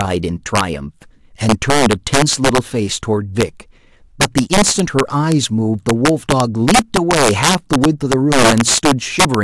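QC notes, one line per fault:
Throughout: integer overflow. The speech is driven about 9 dB past full scale, and rather than being limited, peaks that exceed the integer range wrap to the opposite sign. This affects under two percent of samples, so violent cracks land on loud syllables, far harsher than clipping.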